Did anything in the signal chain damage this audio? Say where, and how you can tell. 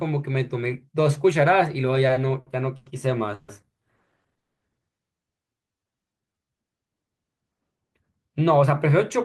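Yes, and it's all at the network and jitter-buffer stage. From 2.07 to 2.88 s there's repeated stalls (stutter): four short holds totalling 210 ms, the longest 100 ms, about a quarter of that stretch, with the last sound stretched over each wait. Nothing's lost, it just drags.

Two call audio freezes follow, at 3.34 to 3.50 s (140 ms held) and 4.38 to 4.63 s (230 ms, fading to 90 ms of silence). The speech then resumes exactly where it stopped, so the likely cause is packets held up on the way and an emptied buffer.

From 5.54 to 6.63 s the speech plays at about 85% speed with unchanged pitch, which is jitter buffer slow-down. The receiver repeated pitch periods to add 169 ms and rebuild its reserve, so sounds come out drawn out.

From 8.29 s to the end it's the reverse, jitter buffer speed-up: the speech runs at about 106%, pitch intact, with around 70 ms trimmed out in small pitch-period chunks as the buffer sheds excess delay. 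It sounds a bit hurried.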